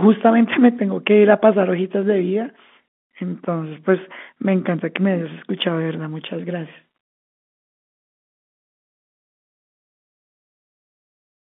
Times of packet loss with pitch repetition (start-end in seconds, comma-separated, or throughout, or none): 1.41